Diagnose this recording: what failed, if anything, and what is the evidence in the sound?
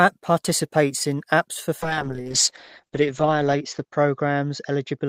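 A call bitrate drop hit the codec stage at 1.83 s, when the call's bandwidth estimate fell and the encoder was given far fewer bits. The speech turns coarse from that point to the end, and its audio bandwidth narrows from 20 kHz to 8 kHz, so it sounds muffled. The degradation fits a fall from about 32 kbps to about 8 kbps, with the roughest stretch lasting about 1.5 s.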